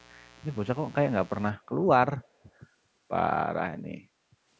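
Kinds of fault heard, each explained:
Mains buzz: From the start to 1.5 s, a steady, raspy buzz sits well below the speech. It is built from 60 Hz harmonics that sharp switching spikes push up to several kHz. On a spectrogram it shows as evenly spaced horizontal lines 60 Hz apart.
Echo leak: From 2.21 to 2.28 s, a very faint, brief scrap of speech repeats 319 ms after the original. It is likely residue that a call's echo canceller failed to remove. On a spectrogram it shows as a weak copy of earlier speech patterns.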